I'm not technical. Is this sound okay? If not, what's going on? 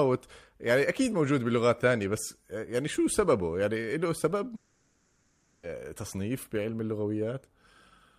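No. From 4.55 to 5.66 s, roughly 1.1 seconds of the speech is missing, replaced by a smeared continuation of the last sound: a buzzy, hissy stretch instead of speech. This is a long network dropout. The likely cause is that the audio stopped arriving over the connection, so the playback side kept stretching out the last sound it had. When the speech returns, that stretch is lost for good.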